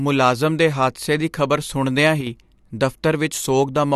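At 2.21 s, just after "ਹਾਦਸੇ ਦੀ ਖ਼ਬਰ ਸੁਣਦਿਆਂ", the speech abruptly drops by about 6 dB until 2.27 s, then snaps back. The likely cause is one channel dropping out briefly: with one side missing, the mono sum loses half its shared signal.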